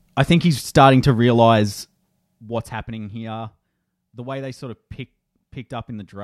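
No technical faults can be heard in this speech.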